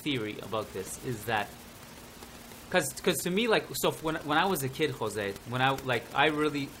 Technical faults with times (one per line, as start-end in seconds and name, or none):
none